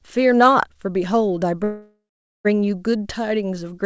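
Speech carried over a call, with its content stopping above 8 kHz, which fits a wideband codec such as G.722. A call audio freeze runs from 1.64 to 2.47 s: the last sound drags on as a fading buzz or hiss, then about 0.45 s of silence, before the speech resumes intact but 0.81 s late. Packets were likely held up in transit, emptying the jitter buffer, which padded the wait rather than dropping audio.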